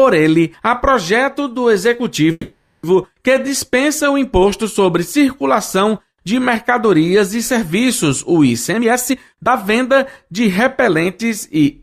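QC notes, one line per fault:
2.31–2.85 s, call audio freeze: the sound stops moving forward and the last moment is stretched into a fading buzz for about 520 ms, with a brief 20 ms silence before the audio resumes where it left off. Nothing is lost; the likely cause is delayed packets draining the jitter buffer, which adds roughly 520 ms of delay from here on.
8.69–11.79 s, jitter buffer speed-up: the audio runs at about 115% speed with unchanged pitch and sounds hurried. The receiver repeatedly cuts out short pitch-period slices, around half a second in total, to shrink the buffer back toward its target after the earlier added delay.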